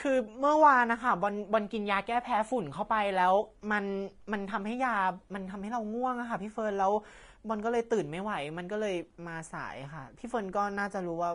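Low-bitrate Vorbis compression, likely somewhere around 32 kbps, runs through the whole of this speech recording, and the damage is plainly audible. Nothing reaches above about 10.6 kHz, so the top octave is simply missing. Below that cut-off, the treble detail has been replaced by noise of similar energy, which makes the sibilants hissy and grainy, roughens the voiced tones, and smears the sharp onsets of consonants.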